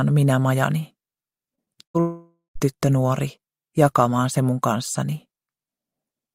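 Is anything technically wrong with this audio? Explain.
Yes, the audio has network packet-loss faults clustered between about 1.5 and 2.6 s.

Short concealed packet loss occurs at 1.55–1.59 s and 1.65–1.68 s. About 20 ms of audio failed to reach the decoder in time each time, and the receiver extended the preceding sound to cover it before blending back. Each gap is heard as a brief smear or wobble.

A burst of packet loss follows at 1.84–1.96 s, where roughly 100 ms went missing in a row. The receiver continued the last sound while fading it down, producing a held buzz or dying hiss. The audio then resumes further along with that stretch gone.

At 2.00–2.57 s there is what is likely a long network dropout, with about 560 ms lost. The concealment stretches the last sound into a fading tail, which gives way to roughly 160 ms of silence before the audio returns with that section absent.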